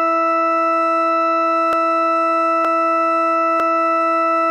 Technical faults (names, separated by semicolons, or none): dropped buffer (overrun)